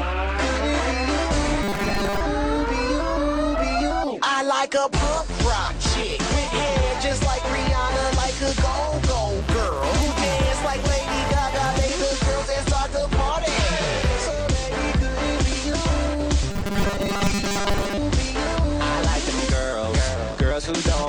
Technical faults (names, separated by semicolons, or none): robotic sound from repeated short buffers